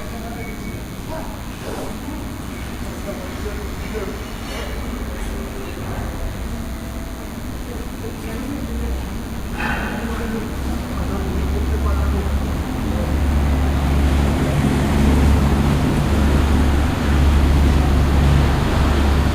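A nearby DECT cordless phone or base station is pulsing its radio signal every 10 ms, and the audio circuitry rectifies those bursts, laying a steady, thin 100 Hz buzz rich in harmonics under these sounds for the whole clip, roughly 25 dB below them.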